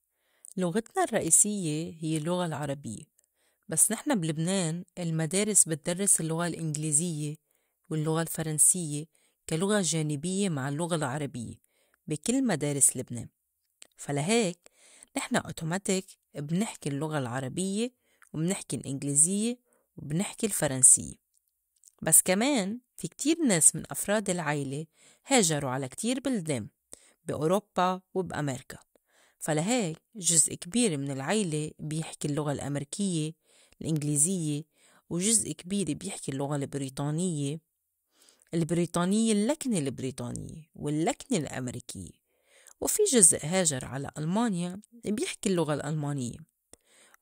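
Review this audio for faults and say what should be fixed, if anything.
Bit error spikes occur at 1.28 s (about -13 dBFS) and 33.96 s (about -19 dBFS). A flipped bit briefly pushes one or two samples off by a power of two, which gives a sharp tick. On the waveform each shows as an isolated needle, and on a spectrogram as a thin full-band vertical line. Interpolate across the affected samples, and prevent recurrence by using error-checked memory and checksummed digital links.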